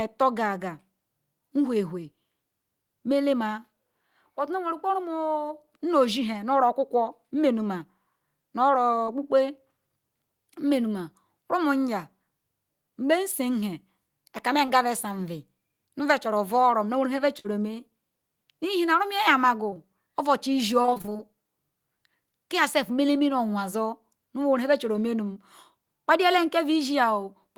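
At 9.05 s and again at 14.65 s there is short concealed packet loss: about 20 ms of the speech never arrived in time, and the receiver bridged each hole by extending the preceding sound before blending back into the real signal. Each is heard as a tiny smear or wobble. On a spectrogram the harmonics run on slightly too smoothly for a frame, and the waveform shows a brief, overly regular repeat of the cycle before it.

From 17.39 to 17.49 s comes a burst of packet loss. Around 40 ms went missing, and the decoder covered the gap with roughly 50 ms of continued sound that fades as it goes. A few milliseconds of real audio are dropped where playback rejoins. It sounds like a brief held sound cut short, followed by speech resuming slightly further on. The spectrogram shows frozen, fading harmonics ending in a small discontinuity, and the waveform envelope dips before snapping back.

Two more short concealed losses follow back to back at 19.70 and 19.74 s, together forming a 40 ms patch that sounds like a slightly longer wobble. 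The spectrogram shows two consecutive frames of smoothed, copied structure.

Between 20.82 and 21.21 s there is repeated packet loss, giving a robotic sound. The pattern points to about ten separate gaps of up to 22 ms each, so nearly half the span is concealment rather than real signal. The result is choppy, with pieces missing. On a spectrogram it appears as a comb of stuttering, repeated frames with harmonics that keep freezing and restarting, and the waveform shows a periodic, chopped envelope.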